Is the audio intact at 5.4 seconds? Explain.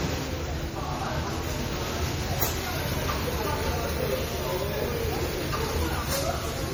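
No. At 5.4 s, as across the whole clip, there is generation loss: the audio was likely decoded and re-encoded about seven times with a low-rate MP3-type codec, each pass requantising on a shifted frame grid. The accumulated noise and spectral holes make the sound swirly, hollow and smeared, with blurred attacks.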